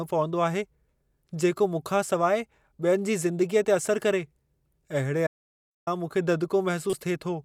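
It's a speech recording with two faults. From 5.27 to 5.87 s there's an audio dropout to silence, about 0.6 s of silence with no room tone, likely the input dropping out while recording carried on. Then at 6.90 to 6.93 s a corrupt frame gets decoded, a short blip of misplaced energy peaking around -20 dBFS, roughly one damaged frame's worth.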